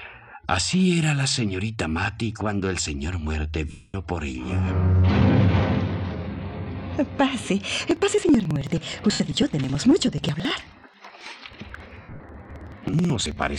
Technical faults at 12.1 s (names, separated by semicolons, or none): periodic USB or driver dropouts; lost LE Audio frames